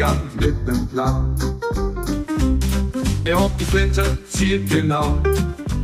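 From about 0.46 s to 2.12 s there's channel delay, and you get comb filtering. One side is running a tiny fraction of a millisecond behind the other, roughly 0.2 ms, so when the two fold down to mono the shared content cancels at regularly spaced frequencies. The first deep notch lands somewhere around 3 kHz, with more spaced out above it. That's what gives that stretch its hollow, slightly phasey, dulled top end.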